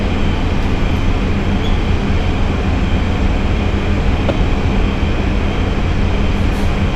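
Damaged data in a compressed stream hits this recording of sounds from 4.27 to 4.30 s: corrupted bytes make the decoder misread frames and lose sync.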